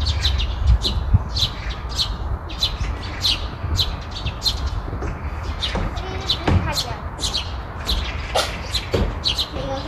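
No technical faults can be heard anywhere in this recording of sounds. Nothing in it points to a problem in how the audio was captured, processed or passed along.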